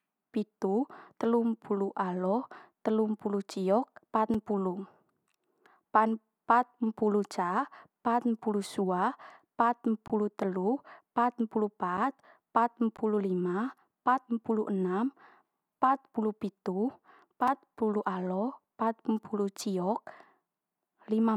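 Right after "telumpulu alo telumpulu ciok", at 4.34 s, the speech drops into a block of digital silence about 5 ms long, and the same fault returns at 10.08 s (about 20 ms), 11.97 s (5 ms), 12.97 s (15 ms) and 17.48 s (5 ms). Each is a run of silent samples, likely where the output buffer went unfilled. The abrupt edges give ticks, with the longer gaps sounding like tiny holes. The waveform shows flat near-silent segments, and the spectrogram shows thin vertical broadband lines.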